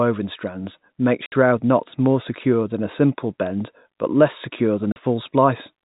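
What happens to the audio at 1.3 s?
At 1.3 s the speech drops out completely from 1.26 to 1.32 s, a 60 ms hole caused by packet loss filled with silence: the receiver had nothing to play for that stretch and inserted silence. The length fits three lost 20 ms packets. The gap sounds like a brief chop with hard edges. On the waveform it is a flat line with abrupt cuts; on the spectrogram, a blank vertical stripe.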